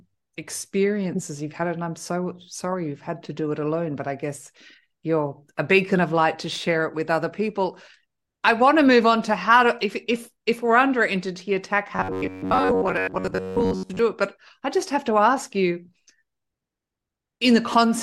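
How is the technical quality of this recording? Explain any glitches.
One glitch is audible: robotic sound from repeated short buffers between 11.96 and 13.99 s, right after "we're under entity attack" and before "it but i just". The speech turns into a rigid, metallic buzz at 93.8 Hz. The likely cause is audio arriving too slowly, so roughly 11 ms chunks are looped for most of that stretch. Unlike a natural rough voice, the buzz follows the original speech only roughly.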